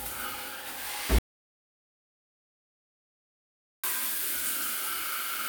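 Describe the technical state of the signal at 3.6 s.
An audio dropout to silence runs from 1.19 to 3.84 s, so at 3.6 s the signal is silent. The input was likely lost while recording continued, leaving about 2.65 s of silence with no room tone.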